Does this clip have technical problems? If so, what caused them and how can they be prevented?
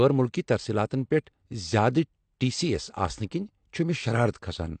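Yes. Throughout, the speech sounds dull and smeared, with nothing above 8.6 kHz. This is likely AAC compression whose lowered cut-off and coarse quantisation fit a 32 kbps AAC-LC encode. Encoding at a higher bitrate prevents it.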